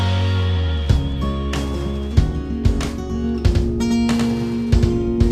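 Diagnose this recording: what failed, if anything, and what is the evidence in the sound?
From 3.10 s onward, a full-band copy trails roughly 100 ms behind, about 5 dB quieter: a doubled audio track, likely from a slower parallel capture path.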